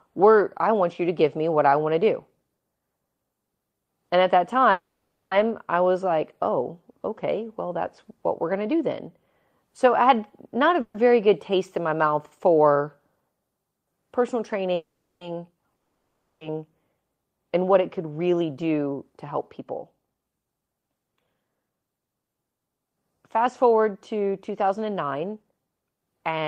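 At 4.71 to 5.33 s, between "at that" and "I was like oh", a call audio freeze stretches the last sound into a fading buzz that ends in about 340 ms of silence, likely from delayed packets emptying the jitter buffer. Nothing is lost: speech resumes where it stopped, 600 ms later. A spectrogram shows smeared, decaying harmonics, then a blank band. Shorter freezes follow at 10.81 to 10.96 s, just before "very good" (130 ms, no silent part), and at 14.75 to 15.23 s (460 ms, ending in 230 ms of silence).

At 15.77 to 16.43 s a long network dropout gives the same fading tail and 230 ms of silence. Here the 640 ms of speech is likely lost in transit rather than delayed. On the waveform the envelope collapses to flat, and speech returns further along, with a discontinuity where the missing section would have been.

A jitter buffer speed-up runs from 17.31 to 21.70 s and again from 24.13 to 25.52 s. 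The buffer had built up more audio than its target, so the receiver cut out short pitch-period fragments, roughly 0.4 s in the first stretch and 0.15 s in the second. Speech plays about 10% fast and sounds hurried, but its pitch stays the same. The spectrogram keeps harmonic spacing unchanged while syllables are compressed in time.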